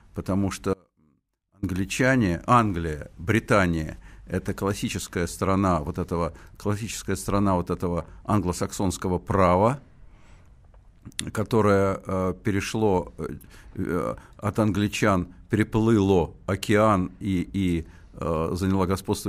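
At 0.74 s the speech drops out abruptly and returns at 1.63 s, an audio dropout to a faint residue lasting about 0.89 s. The gap is not silent: a faint trace of the signal remains, roughly 35 dB below its normal level. The likely cause is a brief loss of the wanted feed while the path downstream stayed live. Unlike a natural pause or a fade, the cut and the return are both sudden, mid-flow, and leave that quiet leak behind.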